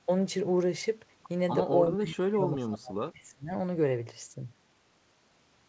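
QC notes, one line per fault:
1.9–3.53 s: speech suppressed in double talk. Speech drops by about 30 dB, likely an echo canceller ducking overlapping talk.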